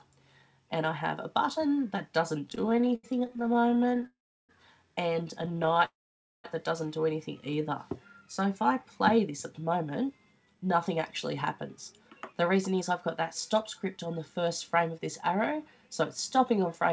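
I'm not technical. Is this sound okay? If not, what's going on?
No. There are three kinds of problem.

Repeated stalls (stutter), from 2.50 to 4.06 s and from 5.43 to 5.83 s: the audio arrived too slowly, so the receiver kept stretching the last bit of sound to fill 41 and then 13 tiny gaps. The gaps last up to 79 ms, and nearly a third of each stretch is filled in. Nothing is lost, but it drags and stutters.

Call audio freeze, from 4.06 to 4.51 s and from 5.85 to 6.46 s: the sound stops and mostly goes silent, for about 0.34 s and then about 0.52 s. It then carries on exactly where it left off. A gap is added, with nothing missing, likely because the audio was held up on its way.

Jitter buffer speed-up, from 9.11 to 10.96 s at 109% speed, 11.77 to 12.91 s at 110%, and 13.53 to 16.91 s at 105%: after the delays, audio piled up. The receiver snipped out tiny slices to catch up, so the sound runs faster without changing pitch and sounds hurried.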